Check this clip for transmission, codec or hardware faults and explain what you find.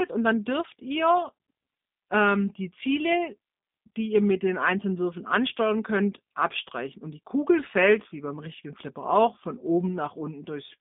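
One codec fault runs through the whole speech clip.

G.729 codec, present throughout: the speech is rebuilt from a vocal tract filter, a pitch predictor and a handful of pulses per short frame, at a rate that fits an 8 kbit/s stream. The line passes roughly 150 Hz to 3.6 kHz, with nothing above about 3.7 kHz. The result is muffled, narrowband speech with plainly audible coding damage, a rough, slightly synthetic buzz on the voice.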